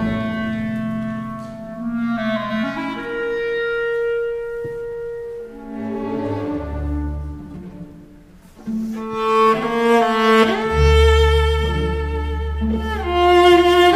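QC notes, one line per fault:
Nothing here needs flagging; it all sounds just as it should.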